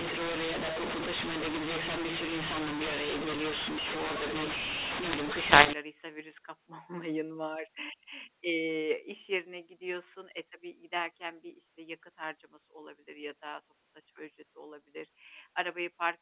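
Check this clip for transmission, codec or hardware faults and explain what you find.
One fault affects the opening of this speech clip. From 0.0 to 5.73 s there is a mu-law and A-law mix-up: A-law telephone samples are decoded as mu-law, scrambling levels, making speech harsh and distorted, and filling pauses with hiss.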